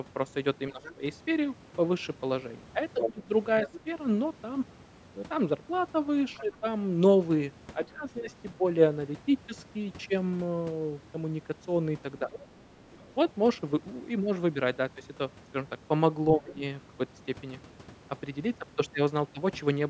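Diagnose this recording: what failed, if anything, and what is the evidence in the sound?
The failure is in call processing, specifically the echo canceller. There's speech suppressed in double talk from 0.7 to 8.6 s: the main speech dips in short bites adding up to around a second, the deepest about 15 dB down. There's a smaller dip of about 5 dB at 12.19 to 12.66 s and a sharp one of about 15 dB at 16.36 to 16.63 s. The likely cause is the canceller losing track when both ends spoke and ducking everything.

The same stage also lets the other side's voice leak through. From 0.83 to 6.57 s a second voice sits only a few dB under the main speech. It comes back much fainter, roughly 15 dB down, from 12.35 to 13.14 s. Most likely the far end played on a loudspeaker got picked up by the mic, and the residual wasn't fully cancelled.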